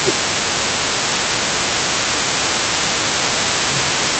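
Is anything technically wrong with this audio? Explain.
Yes. There are two problems, both typical of a call where the two ends talked over each other.

Speech suppressed in double talk: at 0.0 to 0.7 s, 1.1 to 2.42 s and 2.96 to 4.12 s, the speech sinks and thins out in patches, dipping by around 10 dB in the first two stretches and more deeply, around 15 dB, in the last. The likely cause is the echo canceller mistaking the talker's own speech for returning loudspeaker sound while both sides were active, and pulling the level down.

The other side's voice leaking through: a second, fainter voice sits under the speech for the whole clip, from 0.0 to 4.19 s, roughly 15 dB below the main talker. It is consistent with the far end playing from the talker's loudspeaker back into the microphone, with the echo canceller leaving a residue rather than removing it fully. That same competing signal would explain why the suppression above kept triggering.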